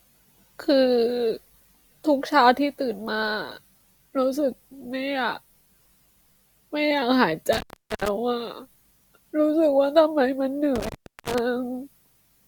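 Intermittent contact at 7.53–8.08 s and 10.76–11.39 s: a loose connection opens for about 0.4 s each time. The speech cuts to faint hiss with crackling edges, unlike a clean digital dropout.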